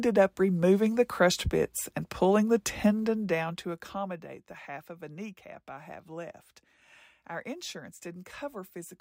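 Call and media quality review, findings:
Zipper noise, 2.86 to 4.35 s, after "bits and pulling the", clearing by "the half of a". Ticking rides the speech as the level drops about 15 dB in 1 dB jumps, around ten a second. Probable gain stage stepping per buffer, no smoothing, each jump clicking.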